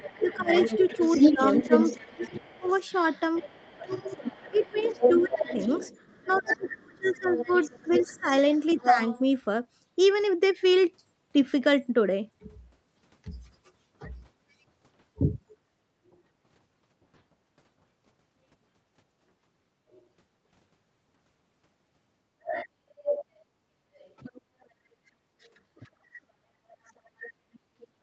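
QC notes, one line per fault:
0.0–9.21 s, 19.91–20.02 s, 22.44–24.66 s, 26.85–27.82 s: other side's voice leaking through. A second voice sits under the talker, about 10 dB below the speech in the first and third spans, roughly 20 dB below near the end, and barely audible at 19.9 s. This is likely far-end loudspeaker playback that the echo canceller did not fully remove.
0.21–8.98 s, 24.92–26.01 s: speech suppressed in double talk. The talker's level drops by roughly 25 dB in the first span, for around 3 s in total, and by roughly 30 dB in the second, for about half a second. This is likely the echo canceller turning down both voices while they overlapped.
24.41–24.6 s, 26.29–28.0 s: background gated by the echo canceller. The room sound drops about 29 dB for roughly 150 ms, then about 24 dB from 26.29 s to the end. The canceller clamped the microphone hard while the loudspeaker was active.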